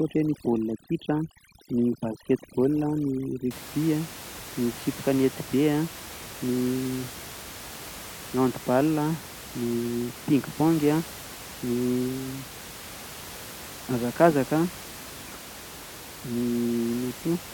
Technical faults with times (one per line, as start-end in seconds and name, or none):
0.00-3.51 overdone noise removal